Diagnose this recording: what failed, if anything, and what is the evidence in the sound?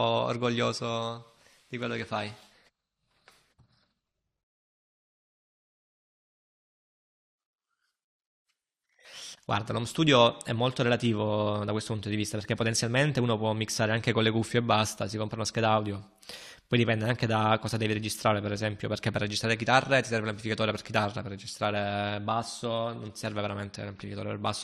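Nothing failed: the recording shows no evidence of a fault at any stage.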